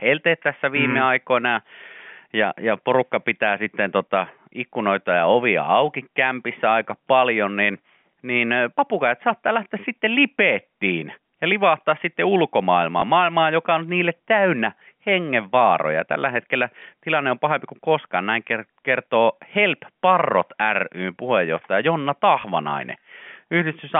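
At 13.0 s, 16.8 s and 22.42 s, the speech, which is band-limited to roughly 150 Hz to 3.4 kHz by G.711 telephone coding, has a brief packet loss with last packet repeated. Each 20 ms gap is filled by replaying the preceding stretch, which fits 20 ms packets. Each splice gives a small blip. On the waveform, a copied 20 ms block appears with abrupt steps at its edges. On the spectrogram, each event shows as a thin vertical line.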